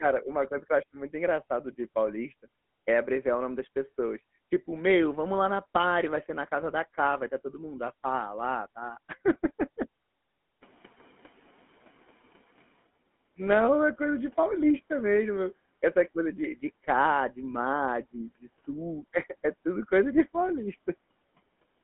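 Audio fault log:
throughout: GSM full-rate codec. The speech passes through a vocal-tract model driven by regularly spaced pulses at a rate that fits 13 kbps, in a 200 Hz to 3.4 kHz line band. The result is a plainly audible buzzy, gravelly roughness with no highs.
1.73 to 1.76 s: GSM bit errors. Flipped bits reached the decoder between "eu acho muito engraçado" and "paulista é abreviar o", which points to two corrupted frames. Bad filter, pitch or gain values there produce a brief squawking, gargled burst.
10.61 to 12.69 s: noise suppressor catching up. The room noise jumps by about 21 dB at roughly 10.5 s, and the suppressor's estimate lags. The noise first comes through with less reduction, then sinks by about 9 dB as the estimate adapts over 2.08 s.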